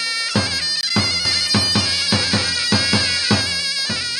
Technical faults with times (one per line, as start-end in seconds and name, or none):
0.81-0.84 corrupt frame muted
1.25-3.41 doubled audio track